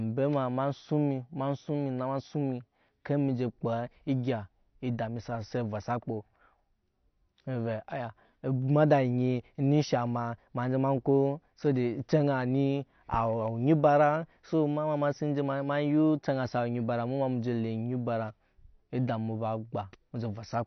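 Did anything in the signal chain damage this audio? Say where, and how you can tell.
Yes, at the codec stage, throughout: nothing above 6 kHz, with warbly, smeared sibilants that a plain low-pass wouldn't cause. This is likely AAC compression at about 32 kbps.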